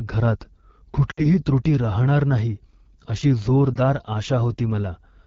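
The whole clip passes through the AMR wideband (HD Voice) codec at a low rate, which fits 8.85 kbit/s. At that rate its pulse-driven vocal tract model can't capture the speech cleanly, so the speech sounds plainly rough and raspy, with a noise-filled top band.

From 1.11 to 1.27 s, lost AMR speech frames leave about 60 ms of damaged audio, consistent with three consecutive frames. The decoder reuses the last good pitch and vocal tract settings at falling gain, so the sound drops to near silence within two frames before "त्रुटी राहणार नाही अशी" returns weak. From 3.74 to 3.78 s, just after those same words, a single lost frame of about 20 ms gives a brief dip or warble.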